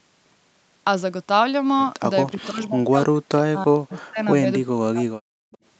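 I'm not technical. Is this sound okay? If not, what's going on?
No. Echo leak at 2.27–2.46, 2.63–2.69, 3.92–3.99 and 5.51–5.58 s: faint scraps of speech return about a third of a second late, likely because a loudspeaker's echo slipped past the call's echo canceller.

Speech suppressed in double talk at 2.32–4.19 and 4.39–5.42 s: the speech drops sharply or cuts out in pieces, likely because both sides talked at once and the canceller turned everything down.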